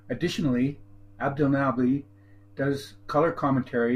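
Speech recording with no technical faults at any point in the signal.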